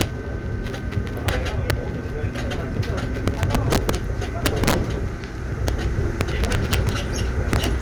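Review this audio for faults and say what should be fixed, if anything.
Integer overflow occurs at 0.01, 1.28, 1.70 and 5.68 s as brief cracks, and over longer stretches at 3.28 to 3.95, 4.46 to 4.74, 6.21 to 6.89 and 7.53 to 7.64 s. The loudest peaks in these everyday sounds were pushed about 1 to 7 dB past full scale. Instead of being held at the limit, those samples wrapped to the opposite extreme, so each one jumps across the whole range. That produces violent snapping cracks far harsher than clipping, and the overdrive is greatest in the 3.28 and 4.46 s passages. The fix is to make the gain and mixing arithmetic saturate at the maximum value rather than wrap.

Lost LE Audio frames show up at 0.67 s as a 10 ms gap, which points to a single lost frame. The LC3 decoder covered the gap by repeating the previous spectrum with scrambled phase signs. This turns that instant into a short noisy smear where the tonal detail briefly dissolves, though it is too short to fade toward silence. 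Light lossy compression is present across the clip as normal. The fix is to strengthen the Bluetooth link with better placement, less interference or retransmission headroom, so frames arrive intact.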